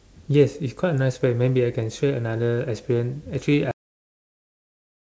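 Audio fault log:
3.71 s onward, cut-off end: the speech stops mid-sound and drops straight to digital silence with no decay, because the final buffers were never written or played.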